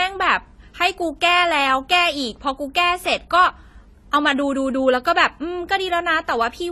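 All the way through this speech clip, nothing reaches above 14 kHz, and two layers of codec smear sit on top of each other. It's likely transcoding between lossy codecs, which fits an HE-AAC encode that was then squeezed again through low-bitrate AAC-LC.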